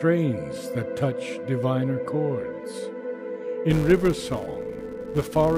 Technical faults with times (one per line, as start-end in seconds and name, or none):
3.71-5.58 filter restarted on every block